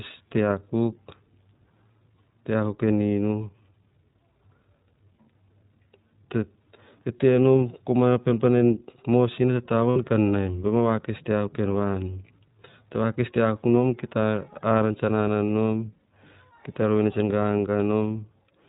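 The whole thing runs through the iLBC codec, and you can plainly hear it. Nothing gets through above 4 kHz, so the speech sounds boxed-in and narrowband, with a rough, slightly synthetic edge on top. That comes from the codec rebuilding each short frame's excitation on its own. The texture fits iLBC's 20 ms frame mode at around 15.2 kbps, where the frames are coded independently and don't carry much detail from one to the next.

Then from about 9.90 to 9.98 s, right before "kan naim", there's a short patch of lost iLBC frames. It sounds like roughly three 20 ms frames went missing. The decoder covered the gap by repeating the last pitch cycle with some noise mixed in, so you hear a brief held, buzzy-breathy vowel where the real audio should be. Because each iLBC frame decodes independently, the voice snaps back cleanly as soon as real frames arrive again.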